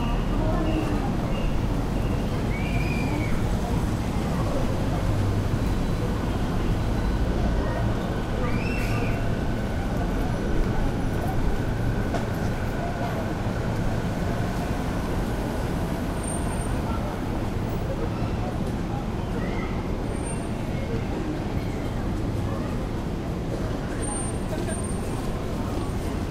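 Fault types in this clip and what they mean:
No faults can be heard anywhere in this recording.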